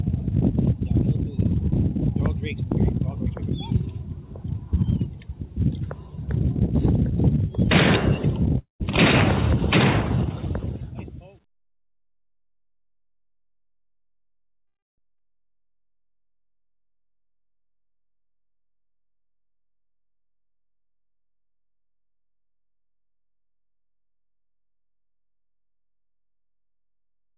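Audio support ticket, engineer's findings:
Call audio freeze at 8.58 s and 14.67 s. Sound stalls, the last bit gets stretched into a short fading buzz, then drops to near-silence before picking up exactly where it left off. First stall runs about 0.22 s with roughly 0.14 s of it dead quiet; second runs about 0.31 s, nearly 0.27 s silent. Nothing lost, just pushed later. Likely packets held up in transit, jitter buffer draining dry and concealment filling the hole.

Skip ahead at 15.18 s, right after the second freeze. Playback jumps forward with barely a seam, only about 10 ms of fill, and roughly 0.3 s of audio is simply gone, the two sides butted together. Looks like the buffer dumping backlog to claw back the delay the freeze added. Timing lines up nicely with that. Band tops out at 4 kHz throughout, which fits G.711 A-law at 64 kbps on the call leg.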